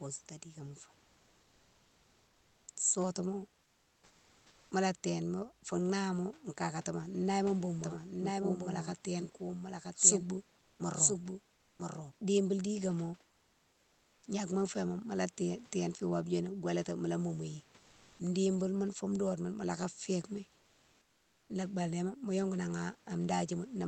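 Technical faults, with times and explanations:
7.84 to 12.12 s, doubled audio track: a second full-band copy of the speech runs about a second behind the original, roughly 5 dB quieter, with no reverb or room colour, starting and stopping abruptly. Likely a slower second capture path mixed back in alongside the first.
10.59 to 10.79 s, 11.55 to 11.79 s, 13.31 to 14.23 s and 17.79 to 18.19 s, comfort noise in place of the background: pauses of 200 to 920 ms lose the real room texture to smoother noise of a different tone, about 10 dB quieter at 11.55 s and within about 3 dB elsewhere. Likely Opus discontinuous transmission halting sending during silence.
11.76 s, onset clipped by the voice detector: the speech resumes abruptly, about 30 ms of its soft beginning missing and replaced by comfort noise. The detector was likely slow to recognise that sound had restarted, so those first milliseconds were never transmitted.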